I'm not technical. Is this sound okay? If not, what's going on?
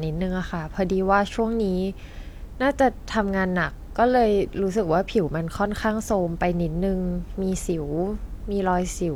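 Yes, nothing in this recording points to a technical problem with how the sound was captured or passed along.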